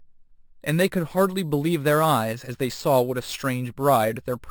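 It's a speech clip with imaging from sample-and-hold upsampling running the whole way through. There's a bright, metallic fizz sitting about 18 dB under the speech that rises and falls with it, and the first mirrored band fills roughly 6 to 12 kHz. That points to audio at a 12 kHz rate being raised to 44.1 kHz by just repeating samples, with no smoothing filter to remove the spectral copies.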